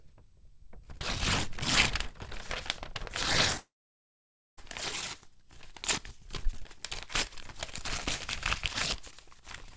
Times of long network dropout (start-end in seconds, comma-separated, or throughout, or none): 3.58-4.59